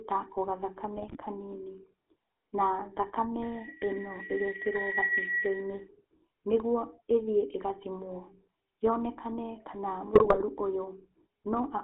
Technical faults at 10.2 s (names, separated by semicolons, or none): GSM full-rate codec; GSM bit errors